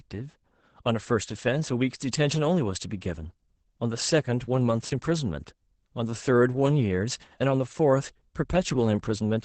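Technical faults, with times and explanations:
Throughout, Opus voice compression: the speech is capped near 8 kHz and sounds muffled and a bit hoarse, fitting Opus SILK at roughly 12 kbps.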